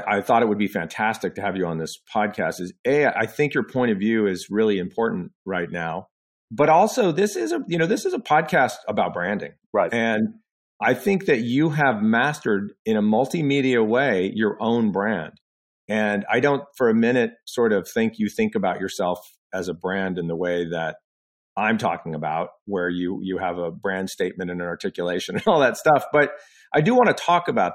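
A speech recording with nothing technically wrong in it.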